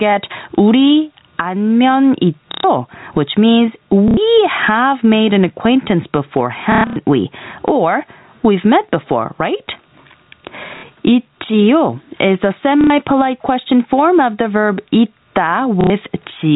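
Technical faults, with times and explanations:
throughout: gain pumping. The gain swings about 20 dB, ducking under each loud syllable. The likely cause is gain set too high, with a fast limiter clamping it.
2.52–2.64 s, 4.08–4.17 s (after "which means"), 6.72–6.96 s, 10.77–10.83 s (before "있지요 is the"), 12.81–12.90 s (after "있지요 is the"), 15.81–15.90 s: packet loss with last packet repeated. Gaps of 60 to 120 ms are filled by replaying the last packet, with a robotic stutter. The 6.72 s burst is scattered, with its longest run at 120 ms. The gap lengths fit 30 ms packets, which buzz at about 33 Hz.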